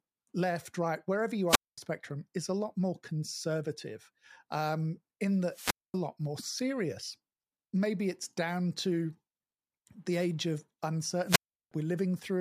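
The analogue FM radio link fades three times until the receiver's squelch mutes it, a wireless microphone squelch dropout: a brief rise of hiss, then near silence, at 1.48–1.78 s (about 0.22 s muted), 5.49–5.99 s (0.23 s) and 11.26–11.72 s (0.36 s), before the speech returns.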